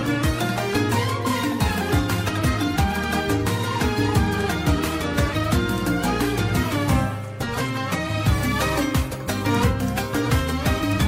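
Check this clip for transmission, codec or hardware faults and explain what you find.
One fault is present, a burst of damaged data in the compressed stream at 1.81 s. The decoder misreads the corrupted bytes, loses frame sync and skips to the next valid header, producing a brief glitch.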